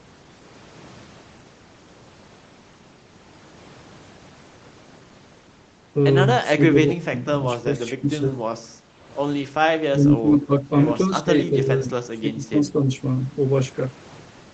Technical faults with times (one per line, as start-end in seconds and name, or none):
6.55-8.39 speech suppressed in double talk
9.58-9.63 speech suppressed in double talk
9.91-10.69 speech suppressed in double talk
11.07-12.57 speech suppressed in double talk